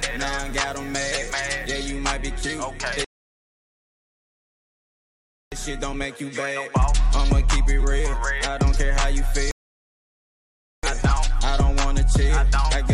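From 0 to 1.92 s there is low bit depth with dither. The sound is carried on very few bits, which fits an 8-bit signal. Dither was added before rounding, so the rounding error does not become distortion. Instead it turns into steady white noise. You hear a constant, even hiss under the sound, roughly 35 dB below it. The hiss does not change with the level of the sound.

At 3.04 s comes a rebuffering stall. The player ran out of downloaded audio and waited for more. The sound cuts to silence until 5.52 s, adding 2.48 s. It then resumes exactly where it stopped, with nothing skipped. A second stall runs from 9.51 s to 10.83 s, adding 1.32 s. Again the sound picks up precisely where it left off.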